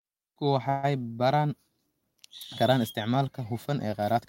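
At 0.69 s the speech stops moving forward and the last sound is stretched into a fading buzz. This lasts until 0.85 s, about 158 ms. There is no dead silence in the gap. Then the speech picks up exactly where it left off, with nothing skipped. The delay is simply added, so everything after it arrives 138 ms later. This is a call audio freeze. Packets were likely held up in transit, draining the jitter buffer.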